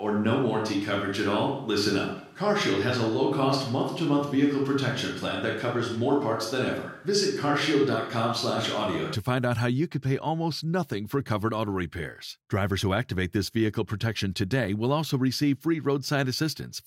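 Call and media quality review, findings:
Roomy, hollow speech with thin bass from 0.00 s (already under way) to 9.15 s, clearing abruptly just before "find out how you". Little level change; faint room noise well below speech. Likely a switch to a distant microphone: room reflections and lost proximity bass instead of close-mic pickup.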